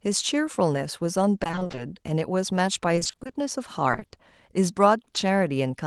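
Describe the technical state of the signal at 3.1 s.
At 3.1 s the signal is inside a burst of repeated packet loss (robotic sound) from 2.95 to 3.35 s. Short holes of up to 20 ms keep recurring, each patched by extending the previous sound, so half the span is concealed. Unlike a single dropout, the rapid repetition gives a choppy texture.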